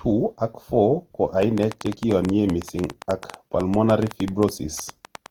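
Opus compression runs through the whole speech clip. The tonal parts of the voice sound rough, grainy and noisy rather than swirly. The band energies are held and starved bands are refilled with folded or noise content, so the audio keeps content up to about 20.2 kHz even though its detail is coarse. This points to the codec's music mode at a low rate of around 16 kbps, which is the likely cause of the damage, and that damage is plainly audible. A train of clicks starts at 1.43 s and continues to 5.27 s. Roughly forty similar pops arrive at an uneven pace of about 9.4 per second. They tick over the sound and through its pauses, peaking around 10 dB above the signal, and repeated pulses from nearby equipment or a faulty connection or power supply are the likely cause.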